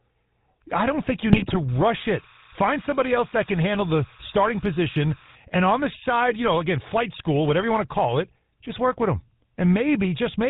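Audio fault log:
Throughout: GSM full-rate codec. The speech carries a buzzy, gravelly roughness, plainly audible, from a vocal-tract model driven by sparse regular pulses at 13 kbps. A spectrogram shows nothing above 4 kHz, with a coarse, combed harmonic texture below.
1.32–1.58 s: GSM bit errors. Corrupted filter, pitch and gain values reach the decoder, so the speech breaks into squawks, pops and gargling. The spectrogram shows smeared, distorted frames across this stretch.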